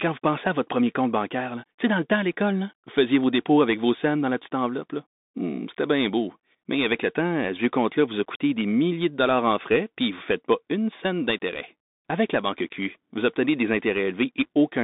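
Throughout the clip, the speech has passed through a Bluetooth CVSD headset codec, which describes the signal one bit at a time as a rising or falling step whose size keeps adapting. The line is squeezed to roughly 200 Hz to 3.7 kHz, and nothing above 3.8 kHz survives, so the speech sounds thin and boxed-in. The damage is plainly audible: loud, bright moments outrun the step size and distort, s sounds turn scratchy, and a grainy hiss sits beneath the speech.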